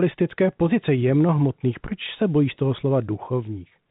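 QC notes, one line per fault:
No faults heard anywhere in this speech clip.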